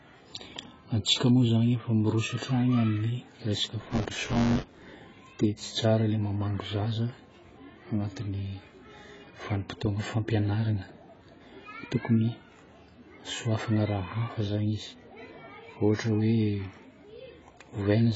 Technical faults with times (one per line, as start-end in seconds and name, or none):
0.00-18.16 AAC compression
3.81-4.91 buffer tearing